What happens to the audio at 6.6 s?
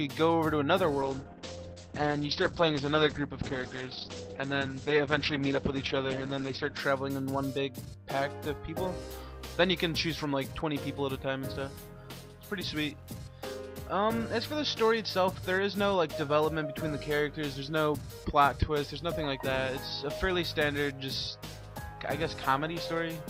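At 6.6 s the audio is still inside a call bitrate drop running from 1.02 to 6.85 s. The encoder fell from 48 to 9 kbps, coding coarsely and narrowing bandwidth from 20 kHz to 8 kHz. Unlike a simple low-pass filter, it sounds rough and watery as well as muffled.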